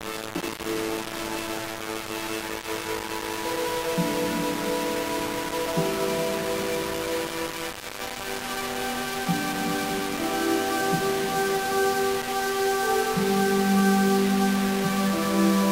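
An everyday sound recording with grainy distortion throughout that tracks the signal, noise roughly 10 dB below it; likely low bit depth without dither, about 3 bits.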